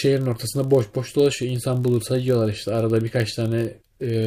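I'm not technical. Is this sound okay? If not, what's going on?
No. All the way through, the speech has a low, steady buzz under it, a rapid flutter about 47 times a second, as if the sound were being switched off and on very quickly. This is a block size mismatch (padded). The audio is passed along in chunks, and one step hands over slightly less than the next step expects, so each chunk ends with a tiny silent gap. The flutter rate points to chunks of about 1,024 samples. The gaps are so small that the speech stays at its normal speed and pitch.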